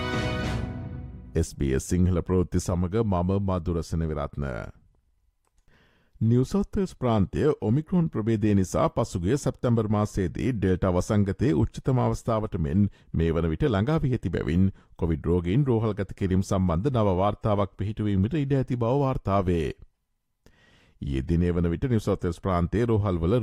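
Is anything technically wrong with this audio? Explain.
No, nothing here sounds technically wrong; the audio just runs along without any glitches or problems worth pointing out.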